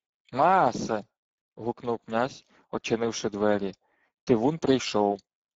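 From start to finish the speech carries Speex codec damage: a plainly hoarse, noisy grain from a starved CELP excitation, consistent with roughly 10 kbps, and nothing above 7.7 kHz. Unlike the swirly, watery artefacts of transform codecs, this roughness sits inside the voice itself.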